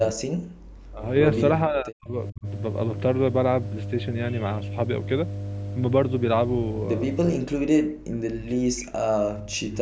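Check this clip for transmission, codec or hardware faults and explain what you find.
Two faults are present: a loud mains hum under the whole recording, and three stretches where the speech is pushed down hard.

Mains hum, throughout: a ground loop or nearby transformer is leaking the 50 Hz power supply into the signal path. The result is a steady low drone at 50 Hz with some low harmonics above it, sitting only about 5 dB below the speech. That makes it nearly as loud as the talker. The call microphone's high-pass filter removes the deepest bass, and the audio stops at 8 kHz.

Speech suppressed in double talk, from 0.13 to 1.03 s, 1.67 to 2.47 s and 7.37 to 9.76 s: the talker's level collapses by something like 40 dB, so the voice sinks, thins out and breaks into fragments. The last stretch runs almost to the end of the clip. The likely cause is an echo canceller that could not separate this talker from loudspeaker echo while the far side was also speaking, so it attenuated everything.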